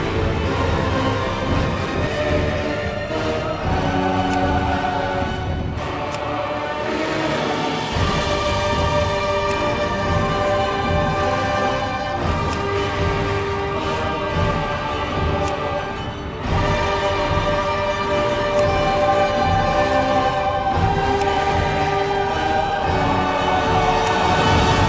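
From the very start until 2.07 s, the audio carries a doubled audio track: a second, equally loud copy trailing about half a second behind, likely captured twice through a slower path. Unlike echo or reverb, the copy is full-band, has no decay or room colour, and stops abruptly at 2.07 s. The audio also has no content above 8 kHz, which points to a G.722 call codec.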